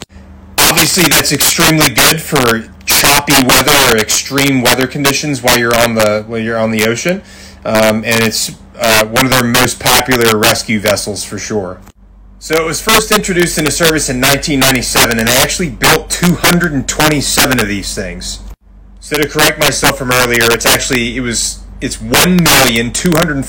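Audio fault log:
Throughout: integer overflow, signal driven about 11 dB past full scale, so roughly 3% of samples wrap to the opposite sign, giving violent cracks on loud peaks.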